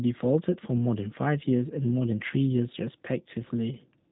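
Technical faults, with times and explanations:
Throughout, G.729 codec: sparse-pulse reconstruction, fitting 8 kbit/s, makes the speech plainly rough and synthetic, and the spectrogram goes blank above 3.8 kHz.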